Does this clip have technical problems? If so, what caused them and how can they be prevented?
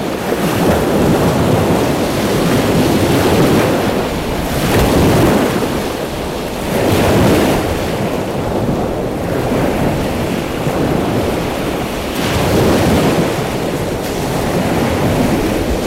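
Yes. Hard clipping runs through the whole clip. The signal was driven about 12 dB past what a stage in the chain could pass, so roughly one sample in twenty hits the ceiling and is sliced flat. Those square tops add high harmonics, heard as a harsh, buzzy edge on every loud passage. The abrupt, bright fuzz that appears only on peaks is what separates it from soft saturation, which rounds peaks and sounds warmer and duller. To prevent it, lower the gain before the overloaded stage so peaks keep several decibels of headroom below full scale.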